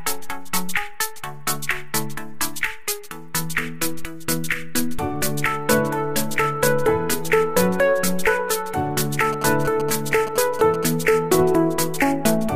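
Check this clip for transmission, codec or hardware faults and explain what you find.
One fault is present: GSM signalling bursts from about 9.33 s to 10.85 s. A nearby 2G phone was exchanging short control transmissions with the network rather than carrying a call. Some part of the audio circuit rectified the RF bursts, so their on-off envelope became audible. The result is a galloping run of brief buzzes at a 217 Hz repetition rate, sitting roughly 10 dB below the wanted sound.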